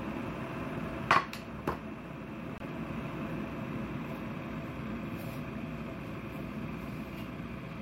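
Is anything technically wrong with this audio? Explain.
Yes. Bluetooth dropout at 2.58 to 2.62 s: a sudden silent gap of about 23 ms, likely one lost wireless frame, after which the sound resumes further along.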